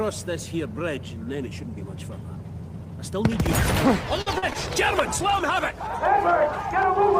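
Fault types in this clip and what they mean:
Repeated packet loss (robotic sound): From 4.21 to 4.56 s the sound turns choppy, broken by four short holes, the longest about 49 ms, with roughly a third of that stretch patched over. Packets kept going missing or arriving late, and each gap was filled by extending the last sound.
Call bitrate drop: From 4.73 to 7.15 s the sound grows rough and watery, with duller highs, and is at its coarsest for about 1.6 s. This points to the call's bandwidth estimate falling and the encoder being held to far fewer bits, roughly from 32 down to 17 kbps.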